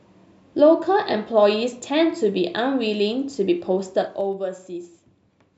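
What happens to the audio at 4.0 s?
Zipper noise runs from 3.86 to 4.33 s. The speech level drops by about 10 dB in unsmoothed steps of about 3 dB, several per second. Each jump leaves a small click. Together they make a ticking, zipping texture over the fade.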